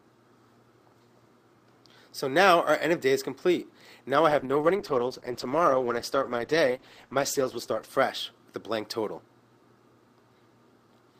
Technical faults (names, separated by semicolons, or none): call bitrate drop